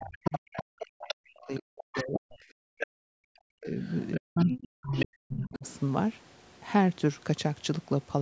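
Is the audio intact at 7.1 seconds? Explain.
Yes, the speech at 7.1 seconds is intact; all that can be heard there is the normal call microphone processing, which trims the lowest bass and carries nothing above 8 kHz.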